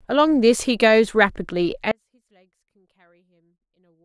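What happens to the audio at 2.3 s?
At 2.3 s the clip is in an audio dropout to a faint residue. The wanted signal was most likely lost somewhere upstream while the rest of the path stayed live, so nothing was truly muted. From 1.92 s the speech cuts out abruptly, with no fade or natural pause, and it never returns before the end of the clip. Across that gap only a faint leak of sound remains, roughly 40 dB below the normal level.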